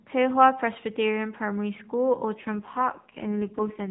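Speech over a narrowband mobile link. At 2.34 s there's an AMR rate drop that lasts to the end: the voice turns buzzy and synthetic, consistent with the codec stepping down from 12.2 kbps to its lowest 4.75 kbps mode, with no gap or band change.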